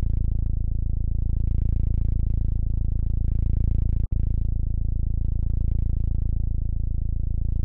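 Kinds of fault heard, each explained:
Gap at a join of encoded pieces: separately encoded segments were spliced untrimmed, leaving encoder delay and padding, so a 52 ms silence cuts the sound at 4.06 s before it resumes.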